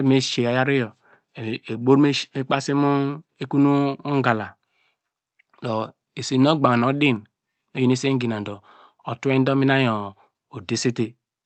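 No technical faults can be heard in this speech, which arrives over a call path whose audio band tops out at 8 kHz.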